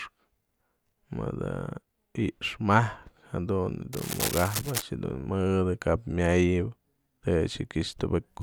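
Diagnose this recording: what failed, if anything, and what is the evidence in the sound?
The analogue wiring is where this one went wrong. From about 3.93 to 4.82 s there's a burst of dense, uneven scratching and rustling sitting over the speech, not far below it in level, which is cable scratch noise. The likely cause is a worn cable, connector or control carrying DC being moved, so its contact resistance jumps around rapidly and dumps those ragged noise bursts straight into the signal.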